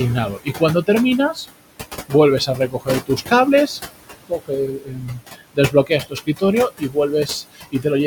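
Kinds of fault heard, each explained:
Noise suppressor artifacts: Heard throughout the clip. The suppressor judges, frame by frame, which frequency bands hold steady noise and pulls them down, here by about 19 dB. The room noise, sitting about 12 dB below the speech, drops away in the gaps and returns under each phrase.
Speech cut by the noise suppressor: At 0.36–0.61, 2.46–3.32, 4.27–4.51, 4.67–6.43, 6.79–7.29 and 7.52–7.86 s. The suppressor mistakes parts of the speech for background noise and turns them down along with it, by about 16 to 22 dB at the deepest. Soft consonants and quieter syllables sound swallowed or faint. The longest loss comes in the 4.67–6.43 s stretch, where around a second of speech is dulled.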